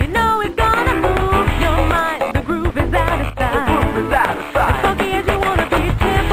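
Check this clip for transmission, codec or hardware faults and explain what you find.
One fault is audible, a sudden gain jump. From 3.30 to 3.40 s the sound and its background noise drop together by about 11 dB, likely from a gain change applied without a ramp. The waveform shows a sharp step down and back, and the spectrogram shows the whole band darkening abruptly.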